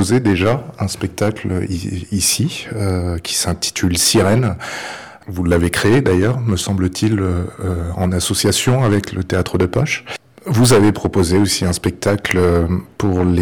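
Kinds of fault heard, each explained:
Hard clipping: The signal is driven about 16 dB beyond what a stage in the chain can pass. Its peaks are sliced flat throughout the clip, on a few percent of samples. The flat tops add high harmonics, heard as harsh fuzz on every loud moment.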